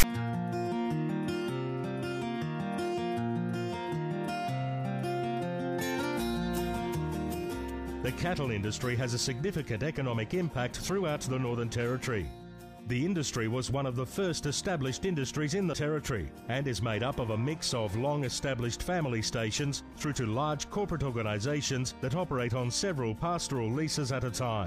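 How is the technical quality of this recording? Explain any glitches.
There is one glitch, at the very start. From 0.00 to 0.04 s, file tags are played as audio: the decoder reads a block of text tags, then zero padding, as sample data. The text produces a harsh rasp offset to one side, and the padding drops to silence, with abrupt edges on both.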